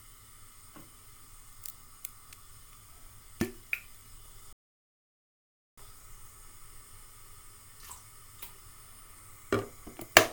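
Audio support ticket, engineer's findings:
Rebuffering stall, 4.53 s to 5.78 s. Sound drops to silence, then resumes exactly where it stopped. No content missing. About 1.25 s of dead time added to playback. Probable component: player buffer. Mechanism: download fell behind playback, buffer emptied, player halted until more data arrived.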